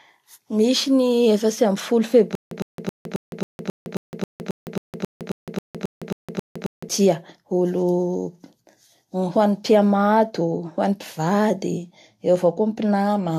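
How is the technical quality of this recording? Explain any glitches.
Two faults affect the quality: coding damage runs through the whole speech recording, and a long stretch of stutter breaks it early on.

Transcoding between lossy codecs is present throughout. The audio was likely encoded once and then re-encoded by a second lossy codec, a chain that sounds like Vorbis at around 66 kbit/s followed by AAC-LC at around 64 kbit/s. The second encoder spends bits on the first one's artefacts and adds its own, so both kinds of artefacts are heard together. Nothing remains above 14 kHz.

Stutter with silent gaps runs from 2.35 to 6.89 s. The player or stream likely stalled and, on each retry, replayed its last fragment before running dry. A 108 ms burst repeats 17 times at an even 269 ms pace, with 161 ms of digital silence between repeats. The speech that belonged in that span is lost.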